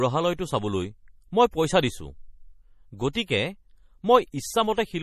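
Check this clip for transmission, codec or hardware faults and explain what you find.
One codec fault runs through the whole recording: MP3 compression, likely at a low bitrate around 40 kbps. Starved of bits, the encoder drops the treble above 14.7 kHz and zeroes weak frequency lines frame by frame, so the speech sounds watery and swirly, with smeared attacks. A spectrogram shows a flat ceiling at 14.7 kHz and flickering holes below it.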